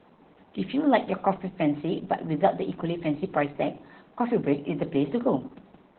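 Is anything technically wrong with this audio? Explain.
Yes, there's heavy Opus voice compression throughout, which fits SILK at around 8 kbps: the band is cut to 4 kHz and coarse excitation leaves the speech muffled, hoarse and slightly robotic.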